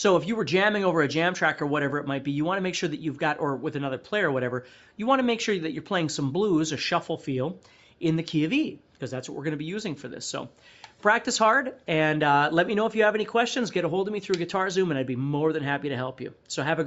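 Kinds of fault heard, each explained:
No kinds of fault are heard in this audio; its top end stopping at 8 kHz is the ordinary bandwidth of the call path it went through.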